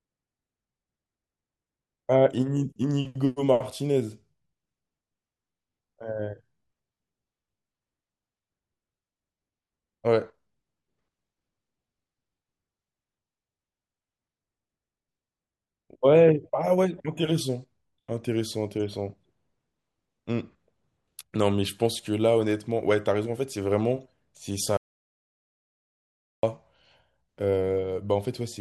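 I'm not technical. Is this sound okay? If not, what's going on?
No. At 24.77 s the speech cuts to total silence until 26.43 s. This is an audio dropout to silence, likely from a lost input connection.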